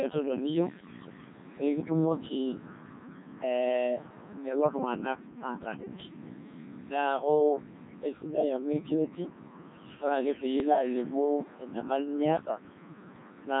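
A speech clip run through the Codec 2 vocoder, with heavy damage throughout: the voice is robotic and buzzy because the decoder rebuilds it from sine waves driven only by pitch, voicing, energy and a coarse spectral envelope. The robotic, buzzy sound fits one of its low-rate modes around 1.6 kbit/s. On a spectrogram the harmonics look unnaturally regular and evenly spaced, with little fine detail between them. The waveform no longer follows the original shape, so it has a synthetic, periodic look. From 10.60 to 10.78 s, bit errors on digital voice radio break through. Corrupted bits reach a decoder where each one sets the pitch, level, voicing or spectrum of a whole frame, so the voice jumps in pitch and loudness and turns into a warbling bleep. The roughly 0.18 s disturbance points to about four frames hit, with an error rate of a couple of percent. On a spectrogram this shows as abrupt blocky steps in harmonic spacing and energy at frame boundaries. 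The waveform shows sudden level jumps.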